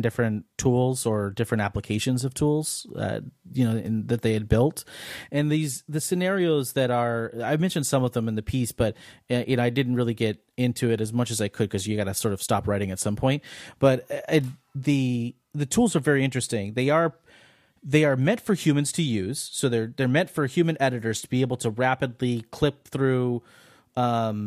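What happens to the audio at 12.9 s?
At 12.9 s the speech carries on cleanly, with no dropout, click, distortion or other fault at that moment.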